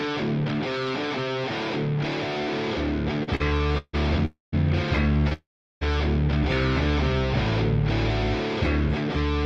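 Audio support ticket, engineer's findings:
Repeated stalls (stutter), 3.23–3.95 s and 5.14–5.33 s. Packets arriving slower than playout, so the jitter buffer kept draining. Nine refills in the first span (longest 154 ms, nearly half concealed), four short ones in the second (up to 27 ms). Audio drags and stutters, nothing lost.

Call audio freeze, 4.25–4.54 s and 5.33–5.83 s. Likely packets held up in transit, jitter buffer ran dry. Receiver extends the last sound, which fades to silence (about 150 ms, then 350 ms). Playback resumes where it stopped, so delay grows by 272 ms, then 479 ms.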